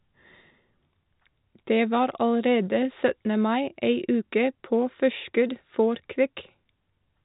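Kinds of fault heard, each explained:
No kinds of fault are heard in this speech.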